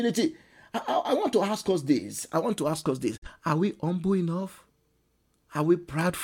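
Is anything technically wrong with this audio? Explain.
Yes. There is a digital broadcast dropout in this speech clip, from 3.17 to 3.28 s, right after "to ask us this". The receiver stopped getting usable data, as happens when frames fail their checksum, so it muted until good frames arrived. The sound fades to silence over about 8 ms and comes back later, with about 43 ms of programme lost, which fits a single dropped frame. Unlike a hard edit or a click, the fade is clean and brief, and the missing material simply never returns.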